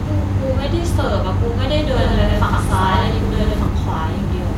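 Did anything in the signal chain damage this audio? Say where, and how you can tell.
Yes. Between 1.95 and 3.67 s the speech is doubled: a second full-band copy runs around a tenth of a second behind, at about the same level. It has no decay and no room colour, so it is not an echo or reverb. It cuts in and out abruptly at those two times. The cause is likely a second, slower capture path, such as a driver or buffer route, being mixed in alongside the main one.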